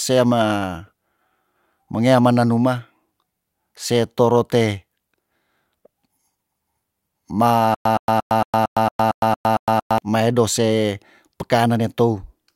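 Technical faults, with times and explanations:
7.75–9.98 s, stutter with silent gaps: a 119 ms fragment repeats ten times, separated by 109 ms silences. A stalled stream likely replayed it, losing the audio between.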